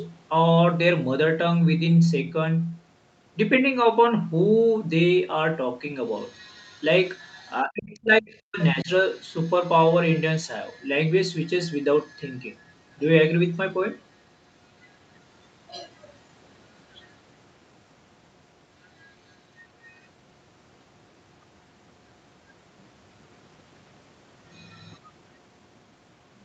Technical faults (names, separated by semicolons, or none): speech suppressed in double talk